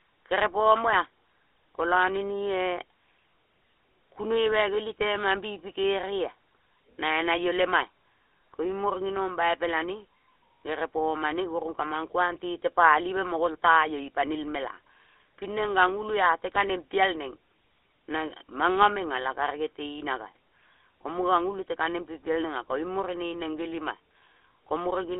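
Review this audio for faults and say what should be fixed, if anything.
GSM full-rate codec damage throughout the speech: band-limited to 300 Hz–3.5 kHz, with buzzy, gravelly roughness from decimated pulse excitation, consistent with 13 kbps coding. Prevent it by capturing or routing the source over a wideband or lossless path instead of a GSM link.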